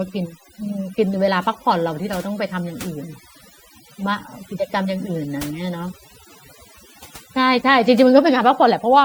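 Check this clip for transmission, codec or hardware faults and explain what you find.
One fault runs through the whole speech clip: overdone noise removal. A noise reduction stage was set too aggressively. Frequency bands near its noise estimate get pushed far down, taking quiet speech detail with them. Pauses drop to near silence with twinkling specks.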